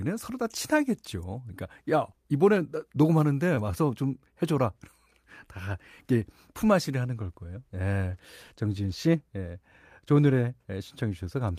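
Between 3.55 and 3.73 s a packet arrived late and the jitter buffer ran dry, causing a short stall from a late packet. The receiver stretched the current sound by about 15 ms, then resumed where it left off. Nothing is lost, but one sound lingers slightly too long with a faint buzz or dip.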